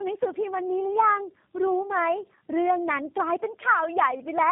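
Right through the speech you can hear tandem speech coding: it sounds like the call passed through about three low-rate speech coders in a row, each re-coding the last one's damage. That leaves it rough, muffled, warbly, and empty above 3.8 kHz.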